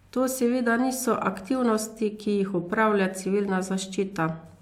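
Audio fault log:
No faults found in this audio.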